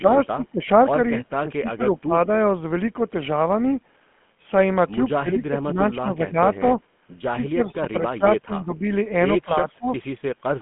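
GSM full-rate codec, throughout the clip: the speech carries the gravelly, buzzy roughness of the first GSM codec. It models the vocal tract and excites it with a sparse, regularly spaced pulse train, so fine detail in the voice is replaced by a coarse, rasping texture, which fits a 13 kbps full-rate coder. The line band runs from about 150 Hz to 3.4 kHz, and nothing is heard above 3.8 kHz, giving a muffled telephone sound.

Speech suppressed in double talk, 9.44 to 9.92 s: the speech dips sharply, falling by roughly 25 dB at its deepest and breaking up over about 0.4 s in total within that stretch. The likely cause is an echo canceller that could not tell the talker apart from loudspeaker echo while both sides spoke at once, so it turned the talker down along with the echo. The result is a brief stretch where the speech fades and chops.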